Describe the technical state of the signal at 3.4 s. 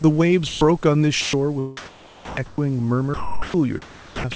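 Steady comfort noise replaces the sound from 3.14 to 3.54 s, losing 180 ms; likely sound dropped by the voice detector, which stopped sending.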